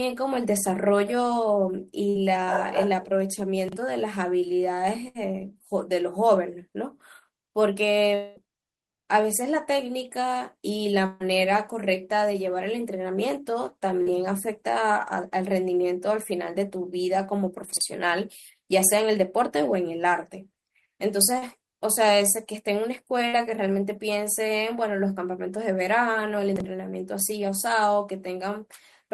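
At 2.09 s a burst of packet loss hits. About 60 ms of the stream never arrived. The receiver stretches the last sound and lets it fade, then the speech resumes further on. The same happens at 5.08 s and 23.28 s, each gap about 60 ms.

At 3.69 s the chunks are out of order. A 40 ms chunk plays one slot late, after the chunk that should follow it. Nothing is lost, but the jumbled order and hard joins give a garbled moment. This recurs at 17.73 s and 26.56 s.

From 8.15 to 8.38 s the last sound holds and fades over about 220 ms. There is no full silence. The speech then returns with that stretch gone. This is likely a long network dropout, with the receiver covering the loss.

At 11.06 s a longer burst of packet loss removes about 140 ms. The held sound lasts over a tenth of a second and decays before the audio picks up again, with the middle missing.

At 14.02 s a short concealed packet loss drops about 40 ms. 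The decoder continues the last sound and blends back in. It is heard as a brief smear or wobble. A second one comes at 21.38 s.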